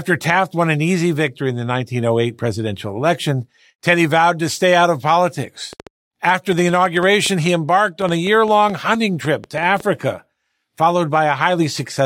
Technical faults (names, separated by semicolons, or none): train of clicks